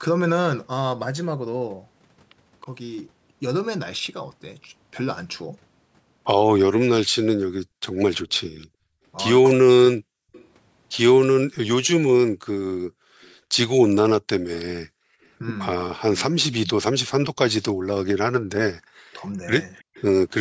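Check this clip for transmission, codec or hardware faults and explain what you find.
Three echo-canceller faults turn up from about 8.4 s onward in the speech.

Background gated by the echo canceller occurs from 8.42 to 10.33 s, 14.84 to 15.24 s, and 19.83 to 19.94 s. The canceller clamps the microphone while the far end plays. Room sound drops by about 40 dB, in brief holes.

An echo leak runs from 8.59 to 14.65 s, from 16.17 to 17.73 s, and from 19.94 to 20.05 s. A faint copy of the speech returns 321 ms late, roughly 20 to 30 dB below it. This is likely residual loudspeaker sound the canceller failed to remove.

Speech suppressed in double talk appears from 18.89 to 19.49 s. The talker's voice dips, by about 40 dB at worst, for a fraction of a second. The likely cause is both sides speaking at once, so the canceller turned everything down.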